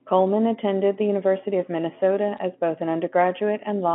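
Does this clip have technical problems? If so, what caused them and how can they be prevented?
Yes, there's a short burst of crackle at about 2.37 s, caused by bit errors on a digital phone line. Flipped bits in the G.711 stream corrupt individual samples, and since mu-law is logarithmic, a hit on the sign or a high bit throws a sample far off and gives a sharp tick. Here it's a quick cluster over about 16 milliseconds, which fits a low error rate of around a tenth of a percent, with the 3.4 kHz telephone band intact around it. Cleaning up the line or adding error detection and concealment on the link would prevent it.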